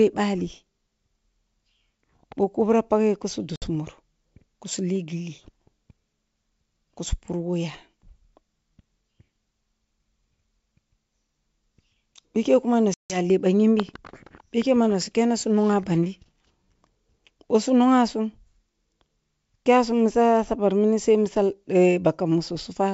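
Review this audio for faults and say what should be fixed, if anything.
Packet loss on an ADPCM call at 3.56–3.66 s (60 ms lost) and 12.94–13.20 s (160 ms lost). Unlike a clean dropout, sound resumes slightly distorted because the decoder's predictor and step size no longer match the sender's. Adding packet-loss concealment and resynchronising the decoder state after each gap would prevent it.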